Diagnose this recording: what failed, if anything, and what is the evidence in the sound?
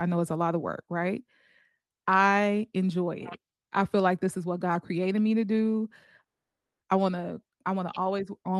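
Network delay likely emptied the jitter buffer, causing a call audio freeze: 0.55 s of silence at 6.26 s after "created me to do", then "I want" resumes with nothing lost.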